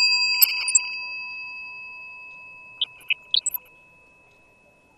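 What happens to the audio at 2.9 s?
At 2.9 s the audio is inside a burst of DAB burbling running from 2.78 to 3.68 s. Bit errors at around half a percent slip past error correction, throwing individual sub-bands out of level and producing bubbling, squelching chirps. Underneath, the audio is dull, with gurgling, granular distortion and upper bands dropping in and out. This is likely MP2 compression at a rate that fits about 80 kbps, too few bits for the sub-bands.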